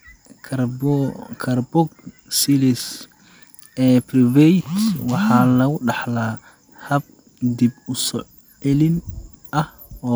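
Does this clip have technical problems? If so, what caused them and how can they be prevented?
No, nothing technical stands out here, so there's nothing to trace back or guard against this time.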